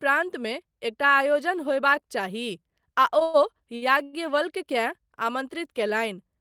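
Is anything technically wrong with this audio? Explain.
Yes, the speech has three brief timing faults clustered in the middle of the clip.

From 3.23 to 3.36 s the sound hangs on a fading buzz or hiss for about 111 ms before carrying on from where it stopped, with nothing lost but the timing pushed back. This is a call audio freeze, likely caused by packets held up in transit so the jitter buffer ran dry and the receiver kept extending the last sound until data arrived again.

At 3.76 to 3.84 s and again at 4.04 to 4.15 s, a sound is held too long with a slight buzz or dip, for 59 ms and 93 ms respectively. Each is a short stall from a late packet: the packet missed its playout time, the jitter buffer emptied, and the receiver stretched the previous sound until it arrived, then resumed in place, adding delay rather than dropping audio.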